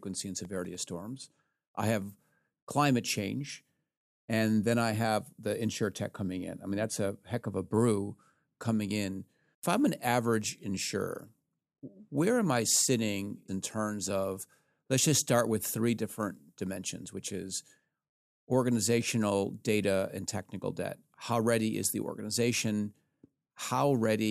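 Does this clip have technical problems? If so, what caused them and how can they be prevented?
Yes: processor overload crackle from 0.36 to 0.87 s, where the processor repeatedly missed deadlines for very short buffers and left tiny silent gaps heard as crackle. Prevent it by using larger buffers or reducing processing load.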